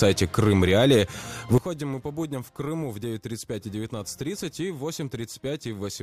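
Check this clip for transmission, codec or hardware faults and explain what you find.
One fault is present: a sudden gain jump. At 1.58 s the whole signal drops by about 12 dB in a single step and stays at that lower level to the end of the clip. The sound and the background noise fall together, with no fade between the two levels. The likely cause is a digital gain change applied from one sample to the next without a ramp, such as a level setting or bit shift taking effect instantly.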